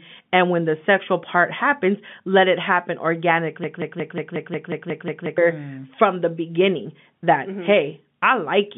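From 3.64 to 5.38 s, a broken-record loop stutters one 180 ms fragment ten times, likely a stalled stream, drawing identical repeating waveform blocks before "mm from the beginning".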